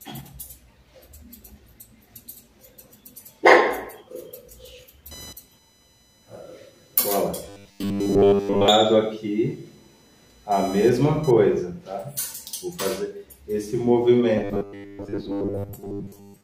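From 5.11 to 11.31 s, computer activity noise appears: a scratchy buzz pulsing around 1 kHz, about 25 dB below the signal, as processor or peripheral load disturbs the shared audio ground.

From 7.49 to 8.68 s and again from 14.38 to 16.44 s, the sound becomes robotic, locked to a rigid 100 Hz buzz. This is likely from repeated short buffers: about 10 ms segments looping while most of the real audio is skipped.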